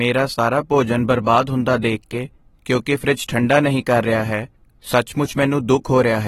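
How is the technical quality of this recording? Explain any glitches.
The recording has plainly audible compression damage throughout, plus one brief dip in level near the start.

Across the whole recording the sound carries plainly audible coding damage, and nothing is present above 16.6 kHz. This is likely AAC compression, in the AAC-LC form. The encoder splits each frame into frequency lines and spends its limited bits according to a hearing model, discarding what it judges least audible. The cut-off and the damage fit a low bitrate of around 29 kbps.

From 0.34 to 0.39 s, a span of 50 ms, the level falls abruptly by about 6 dB and then recovers, with nothing else about the sound changing. The likely cause is one channel dropping out of a stereo source that carried the same sound in both channels. When that source is summed to mono, losing one side halves the signal, which gives exactly this 6 dB step.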